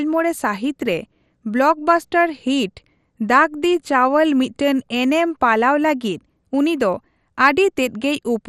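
A speech recording carrying MP2 compression damage throughout: dull, granular and gurgling, with nothing above 15.1 kHz, likely from starved Layer II sub-bands, consistent with roughly 64 kbps.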